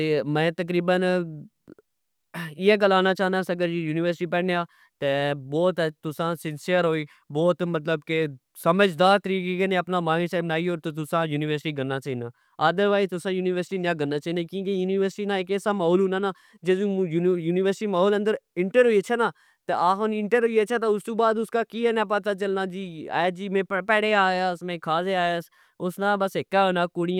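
No technical faults can be heard anywhere in the recording.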